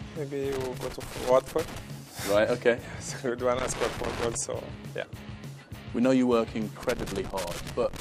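Three bursts of loose connector crackle turn up, at 0.52 to 1.79 s, 3.59 to 4.35 s, and 6.83 s through to the end. A worn or dirty contact keeps making and breaking as it shifts, chopping the signal into ragged, scratchy crackle.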